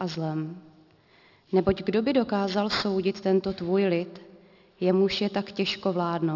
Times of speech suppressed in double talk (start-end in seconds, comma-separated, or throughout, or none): none